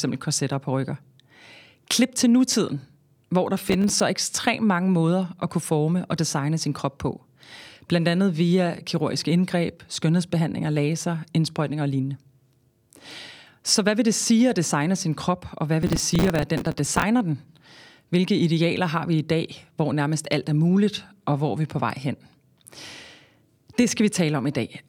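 From 3.62 to 4.0 s, and again from 15.83 to 17.03 s, processor overload crackle tears through the speech. The processor misses buffer deadlines, which fits buffers of around 5 ms. Stale audio repeats with hard edges. The second burst is longer, with about 50 missed buffers against about 10.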